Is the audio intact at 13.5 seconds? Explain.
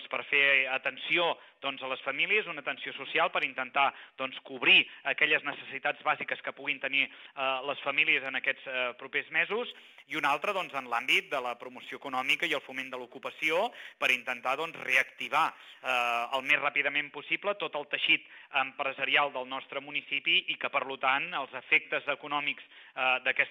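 No. From 9.71 to 16.51 s, crude rate conversion drops samples without filtering, consistent with a 48 to 44.1 kHz change, adding a gritty, inharmonic fizz roughly 25 dB below the audio.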